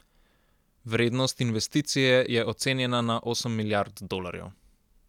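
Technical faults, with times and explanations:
No technical faults are audible.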